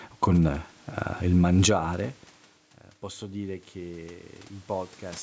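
Gain pumping runs throughout this short speech clip: the gain swings by roughly 5 dB, squashing loud and quiet passages together, and the room noise sits about 37 dB below the speech. The likely cause is input gain set too high for the microphone, with a fast limiter or compressor clamping down on each peak and releasing in the gaps. The call's microphone processing leaves nothing above 8 kHz.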